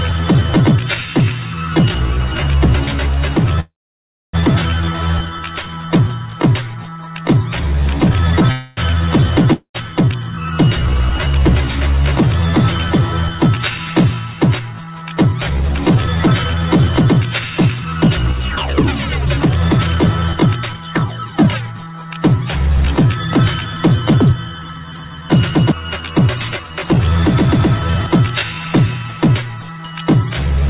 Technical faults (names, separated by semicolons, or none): call audio freeze; long network dropout; jitter buffer speed-up